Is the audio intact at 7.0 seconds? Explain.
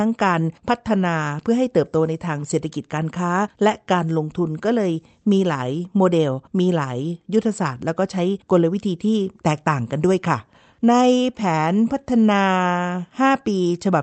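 Yes, at 7.0 seconds the speech is intact, with no fault present and only the ordinary band-limiting of the call path, whose audible content stops around 8 kHz.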